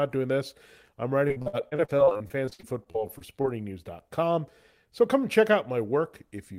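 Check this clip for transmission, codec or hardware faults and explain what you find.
There's repeated packet loss (robotic sound) from 1.27 to 3.46 s, right after "doing this I'm". Packets kept dropping, 24 gaps in all, the longest 55 ms, and each gap got patched by stretching the last sound. That concealment fills about a quarter of the stretch, so the speech turns choppy and robotic.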